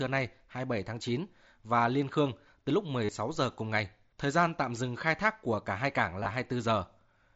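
Speech with two brief buzzy patches: a held tone from 3.05 to 3.09 s with a slight warble as speech resumes, then scattered dropouts from 6.21 to 6.31 s, none longer than 15 ms. This is concealed Bluetooth headset packet loss over the mSBC link, where the receiver fills each missing packet by repeating the best-matching recent stretch of waveform.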